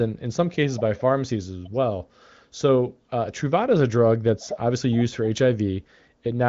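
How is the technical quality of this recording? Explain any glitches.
No glitches turn up anywhere here: it's speech carried over the AMR wideband (HD Voice) codec at 23.05 kbit/s, so the sound simply tops out at around 7.5 kHz, which is just how that path is meant to sound.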